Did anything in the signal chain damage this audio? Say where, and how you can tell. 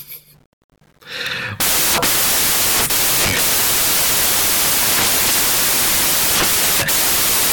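Yes. From start to finish the speech is buried under loud, harsh noise that sounds close to white on the louder passages. That points to the sample-format conversion stage: samples built from the wrong bytes. The reader assembles each sample with its bytes misplaced, whether offset, swapped or misaligned, so the rapidly changing low-order bits land in the most significant position and dominate every value. Loud passages therefore become dense noise.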